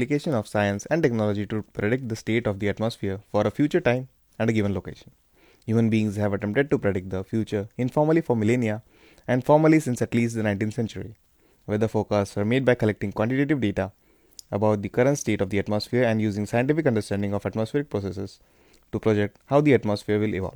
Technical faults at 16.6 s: none

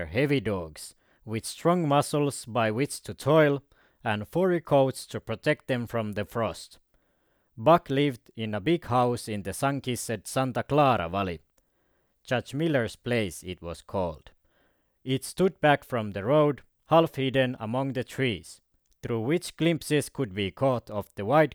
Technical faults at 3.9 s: none

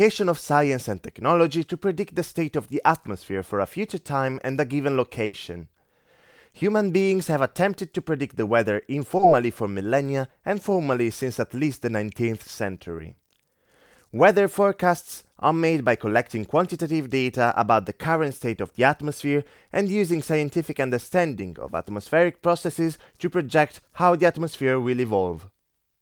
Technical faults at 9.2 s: short concealed packet loss

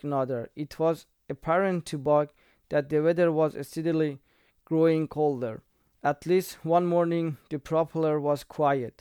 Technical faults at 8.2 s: none

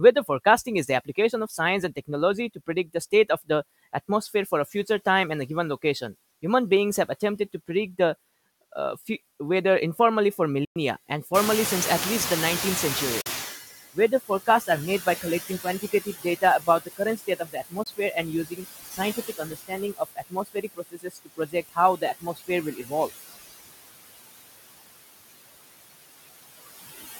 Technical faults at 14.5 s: noise suppressor artifacts; speech cut by the noise suppressor

